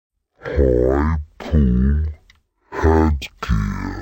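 The whole clip suffers from stereo read as mono. Interleaved left and right samples are taken as one channel, so everything plays at 0.5x speed and 12 semitones lower. A spectrogram shows stretched, octave-low content plus a faint mirrored copy across the upper half.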